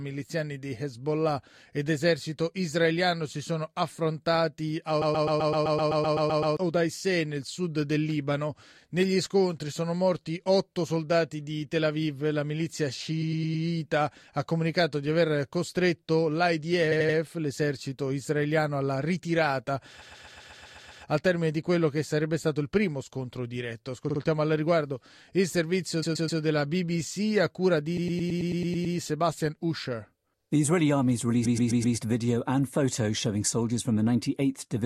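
Repeated frames stutter the audio at 5.01–6.54, 13.21–13.64, 16.91–17.17, 20.01–21.03, 24.09–24.19, 26.02–26.40, 27.96–28.95 and 31.44–31.96 s. A short block of compressed audio, 44 to 128 ms long, plays again and again. Each repeat jumps back.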